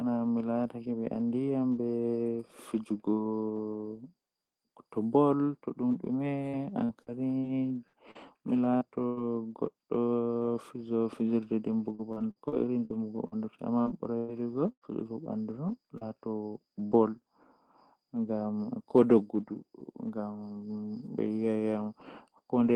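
Choppy, robotic speech breaks up twice in this clip. From 6.49 to 9.19 s the sound turns choppy, with eight gaps (the longest about 98 ms) that together remove about 400 ms and leave around 15% of that stretch made up. The same thing happens from 11.95 to 14.84 s, with nine gaps (the longest about 103 ms), about 500 ms missing and about 17% concealed. This is repeated packet loss (robotic sound). Packets kept going missing or arriving late, and each hole was patched by continuing the last sound before the next one hit. Roughly 150 ms in each stretch was instead rebuilt from error-correction data. Between 15.98 and 16.04 s there is a brief smear or wobble. That is short concealed packet loss: about 40 ms never reached the decoder in time, so the receiver extended the preceding sound over the hole and blended back into the real signal. Inside that window, from 16.01 to 16.03 s, one 20 ms frame sounds rougher and noisier rather than absent. 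That frame is a lost packet rebuilt from error correction, played from the low-bitrate copy carried in the following packet (Opus in-band forward error correction), which is why it comes through coarse but without a gap. At 16.87 to 16.94 s the sound briefly holds and fades before resuming further on. This is a burst of packet loss: about 40 ms went missing and was bridged by continuing the last sound at a falling level, so that piece of the audio is gone. Within the burst, from 16.91 to 16.93 s, another 20 ms frame has the same rough, noisy texture, again a lost packet rebuilt from error correction.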